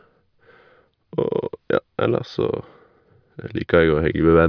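Nothing in this bit of speech stands out as a technical fault; there's nothing to flag from beginning to end.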